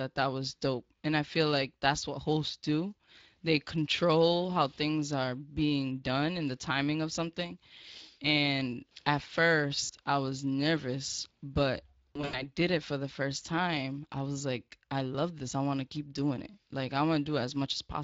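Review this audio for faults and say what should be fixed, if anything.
Hoarse and grainy speech runs through the whole clip. That is plainly audible Speex codec damage: the CELP coder has too few bits to model the excitation faithfully, which fits a setting near 20 kbps. Encode at a higher Speex quality, or use a modern wideband codec.

Brief smeared dropouts occur at 9.83 to 9.91 s, just before "I was nervous but", and at 12.14 to 12.50 s, between "I was nervous but" and "it for the first". This is VoIP packet loss concealed by the speech codec. The decoder stretches its last pitch and filter while fading the gain, and the second event sounds like several short, scattered gaps. Reduce network loss, or add jitter buffering and forward error correction.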